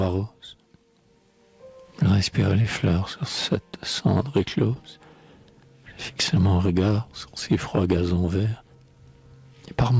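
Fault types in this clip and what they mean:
Short concealed packet loss: twice, about 20 ms of audio from the call never reached the decoder in time, near 2.62 s and 4.74 s. The receiver covered each gap by extending the preceding sound, either carrying on its pitch or as shaped noise, then blended back into the real signal. The first patch fills 20 ms and the second about 15 ms. Each is heard as a brief smear or wobble in the band-limited audio, which stops at 8 kHz.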